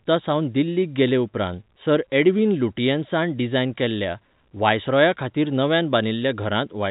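No technical faults are audible.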